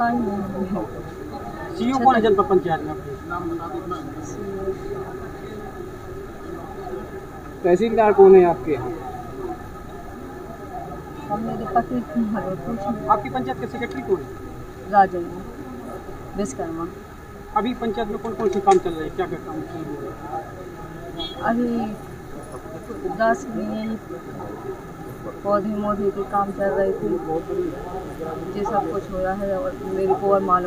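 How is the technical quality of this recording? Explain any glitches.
One fault is present: mains buzz from 27.35 s to the end at 30.67 s. Sharp switching spikes, twice per 60 Hz cycle, spread harmonics into several kilohertz, producing a steady, raspy buzz about 20 dB below the signal.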